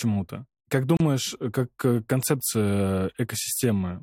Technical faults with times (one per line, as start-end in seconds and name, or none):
0.97-1.00 gap at a join of encoded pieces